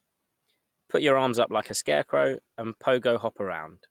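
At 1.26 s the call's bandwidth estimate falls and the encoder is pushed to spend far fewer bits, a call bitrate drop lasting until about 2.93 s, with the lowest rate held for roughly 1.6 s. The speech turns coarser and duller, with the top end trimmed away and a rough, watery edge. That shift fits a fall from around 48 kbps to about 17 kbps, before the fuller sound returns.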